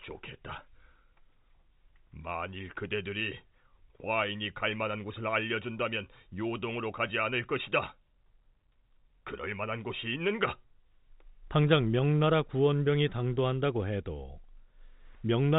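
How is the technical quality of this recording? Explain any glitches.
No glitches turn up anywhere in the recording. The speech comes through G.711 telephone coding, so it has the narrow telephone band with nothing above 3.8 kHz.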